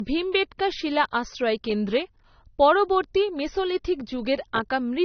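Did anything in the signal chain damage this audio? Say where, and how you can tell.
Yes, at the codec stage: the speech has nothing above 6.3 kHz for the whole clip, a hard ceiling a spectrogram shows as a flat top edge. This is likely low-bitrate audio saved at a high bitrate, so the larger file still carries the earlier encoding's cut-off and artefacts.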